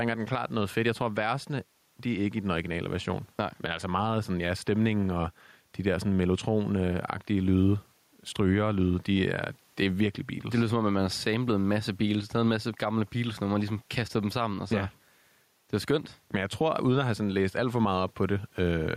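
Speech recorded with gain pumping throughout, likely from input gain set too high and a fast limiter clamping each loud syllable. The level swings by roughly 5 dB, squashing dynamics, and the quiet room noise sits about 44 dB below the speech.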